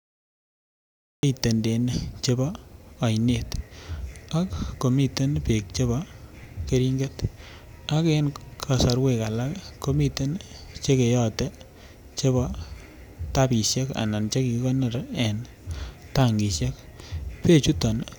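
The first 1.23 s are dead digital silence, then the speech jumps in mid-sound with no attack: a classic cut-off start, where capture began a beat too late.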